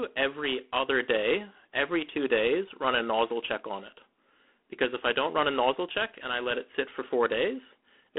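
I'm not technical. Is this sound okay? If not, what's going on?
No. Throughout the recording, the speech has gone through G.726 ADPCM, a telephone coding method that saves space by sending only rough guesses of how the sound changes from moment to moment. Here it is set to a low quality, so those guesses are coarse. You hear a harsh, rasping hiss that rises and falls with the speech. The call-style line also strips the highs and deep lows, leaving a thin, phone-like sound.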